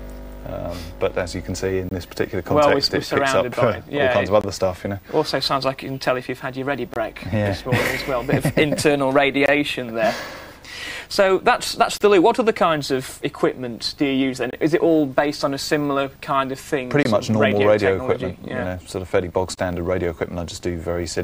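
A gap between chunks occurs at 1.89, 4.41, 6.94, 9.46, 11.98, 14.51, 17.03 and 19.55 s. Each is a hole of about 23 ms, recurring after every 2.5 s of audio, where silence was inserted at the joins without any sound being lost.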